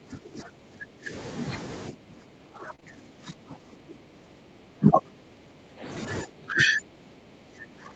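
From the start to 1.12 s the speech sinks by as much as about 20 dB. The likely cause is speech suppressed in double talk: the echo canceller could not tell the near talker from loudspeaker echo while the far side was also speaking, so it turned everything down. Unlike packet loss, this is a long, level-driven ducking.

The same suppression returns from 1.91 to 5.84 s, reaching about 15 dB at its deepest, and again from 6.24 s to the end, at about 20 dB.

Inside the second stretch, from 2.55 to 2.73 s, comes a lost packet rebuilt from error correction. Five separate packets, about 100 ms of audio, were played from the low-bitrate copies Opus carries in the following packets. This section sounds grainier and noisier but stays continuous. In this 8 kHz-wide call there is no extra top-end dip, since the band already stops at 8 kHz.

Immediately after, from 2.75 to 2.80 s and from 2.80 to 2.83 s, come two short concealed packet losses. 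Each missing 20 ms was bridged by extending the previous sound's pitch or noise shape, then blending back into the real audio. The result is a quick smear or wobble, a different sound from the rough but intact texture of the rebuilt packets just before.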